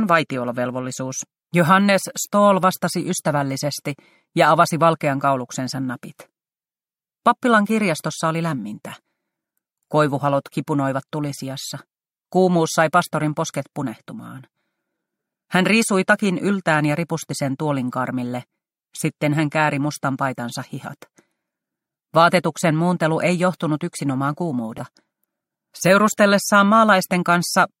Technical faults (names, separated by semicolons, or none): damaged data in a compressed stream